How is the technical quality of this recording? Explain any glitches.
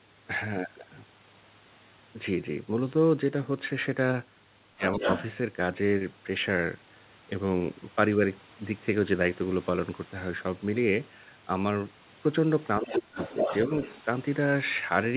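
The recording has two problems, both at moments when the far end talks over the near talker, and everything sits in a narrow band with nothing above 4 kHz, which fits a G.711 mu-law call path.

Speech suppressed in double talk occurs at 4.72–5.07 s and 12.79–13.18 s. The talker's level plunges by roughly 20 dB and then about 30 dB. The likely cause is an echo canceller treating overlapping speech as echo. Unlike a network dropout, the gaps coincide with the other voice.

The other side's voice leaks through at 4.9–5.24 s, briefly at 12.9–12.95 s, and at 13.18–14.0 s, where it sits only a few dB under the talker. It is likely residual loudspeaker echo that the canceller failed to remove. It trails the suppression.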